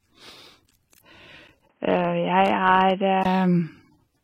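Throughout the speech, the sound carries the layered artefacts of transcoding between lossy codecs, likely an AAC-LC encode followed by an HE-AAC re-encode, which fits bitrates around 32 kbit/s. Nothing survives above 16.2 kHz, and the second codec's smearing sits on top of the first's.

From 1.68 s to 3.25 s, the input switched to a poorer device, likely a lower-quality microphone or headset path. A 20 ms silence marks the change. The band then stops at 3.2 kHz, so the speech turns dull and boxy, with a faint new noise floor far below the signal and no real level jump. Full bandwidth returns at 3.25 s.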